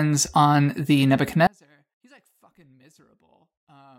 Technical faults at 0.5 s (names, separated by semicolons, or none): none